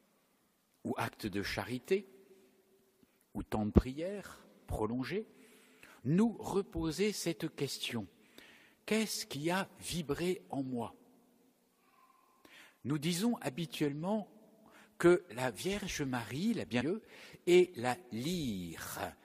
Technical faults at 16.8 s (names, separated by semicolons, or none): stream segment skipped